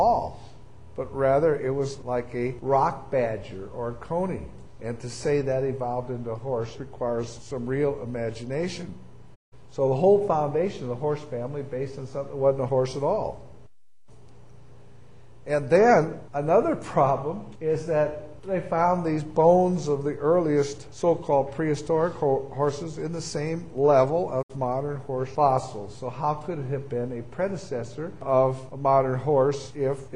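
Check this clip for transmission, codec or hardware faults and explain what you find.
Two digital broadcast dropouts are present. At 9.34–9.54 s and 24.41–24.52 s, the receiver muted on lost or corrupted frames: a 20 ms fade into silent gaps of 160 ms and 64 ms, with that audio lost.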